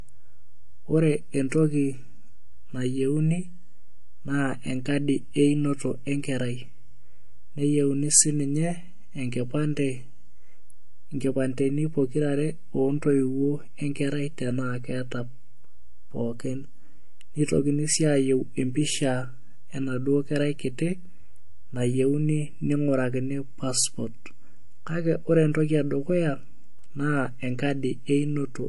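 MP3 compression runs throughout, with plainly audible watery, swirling treble that fits a low bitrate around 48 kbps, likely from the encoder zeroing weak frequency lines. Pre-echo appears at 1.49 to 1.52 s and at 25.53 s: long 48 ms blocks smear quantisation noise about 12 dB and 10 dB ahead of sharp attacks, leaving brief hiss before each.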